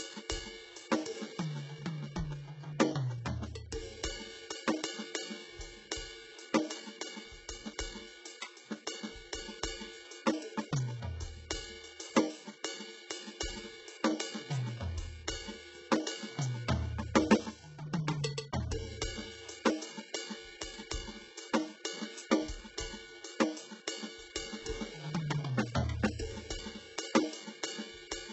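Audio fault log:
throughout: HE-AAC compression, heavily damaged music with nothing above 8 kHz and gritty, metallic treble, likely HE-AAC at around 8 kbps rebuilding highs from copied lower bands.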